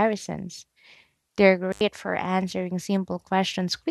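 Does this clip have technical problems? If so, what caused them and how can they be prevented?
Yes. An intermittent contact opens at 1.71 s and closes by 1.81 s. A loose cable or plug breaks the signal path for about 85 ms. Unlike a clean digital dropout, the cut is framed by crackle and leaves faint hiss instead of dead silence. Reseating or replacing worn cables and connectors, and securing them with strain relief, prevents it.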